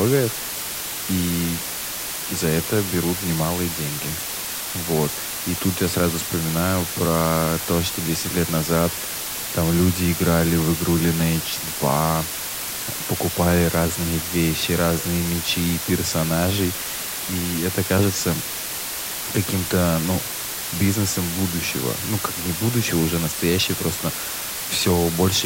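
Speech runs for the whole clip under a constant, even hiss from low bit depth with dither, which fits roughly 4-bit quantization. Dither turns rounding error into white noise nearly as loud as the voice, so a spectrogram shows a flat grey floor across all frequencies and the waveform looks fuzzy, with no distortion.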